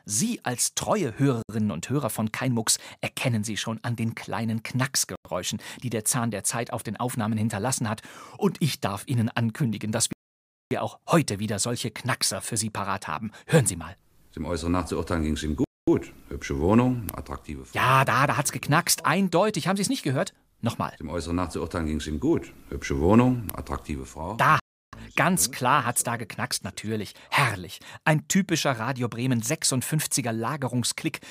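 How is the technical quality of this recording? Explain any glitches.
The speech is interrupted by five dropouts to silence. A Bluetooth stall is the likely cause. Gaps fall at 1.43–1.49 s (64 ms), 5.16–5.25 s (96 ms), 10.13–10.71 s (583 ms), 15.64–15.88 s (233 ms) and 24.60–24.93 s (331 ms). Interference delays wireless packets, the receiving buffer empties, and playback halts until retransmitted audio arrives. Each time, the sound cuts abruptly to silence and then resumes, with the half-second gap near 10 s the longest.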